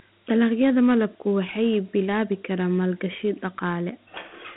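Dialogic VOX ADPCM throughout: coarse 4-bit coding, fitting a 32 kbps stream, leaves gritty hiss on the speech, within a 150 Hz to 3.5 kHz band, nothing above 3.8 kHz.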